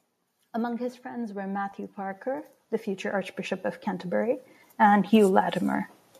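From 0.76 s to 5.9 s the level climbs steadily, a case of automatic gain rising. The gain control judged the incoming speech too quiet and kept raising its gain, adding about 15 dB over roughly five seconds. Because the boost is applied to the whole signal, the voice and the background noise floor swell together.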